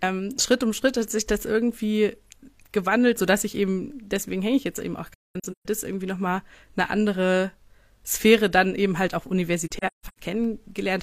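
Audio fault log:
5.13–5.66 s and 9.67–10.18 s, AAC frame loss with muting: the speech drops out in soft-edged gaps, about 384 ms of sound missing in the first span and 341 ms in the second, each scattered across roughly half a second, with the longest continuous hole around a fifth of a second in the first and shorter in the second. The pattern points to several lost AAC frames per span, each zeroed by the decoder, so the overlapping windows fade out and back in.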